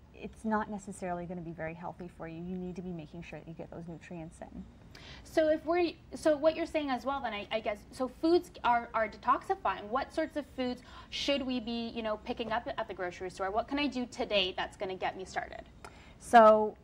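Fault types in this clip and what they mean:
timecode bleed: Linear timecode at 23.976 frames per second leaks in from a neighbouring line, adding a faint chirping warble near 1 and 2 kHz, about 45 dB down.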